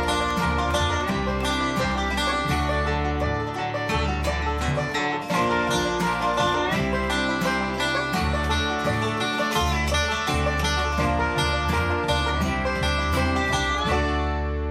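From 0.11 s to 1.91 s there are periodic USB or driver dropouts. Every 0.1 s a stall drops roughly a millisecond of audio and leaves silence, about twenty times, heard as an even ticking. The waveform shows regularly spaced hairline gaps, and the spectrogram shows thin vertical broadband stripes.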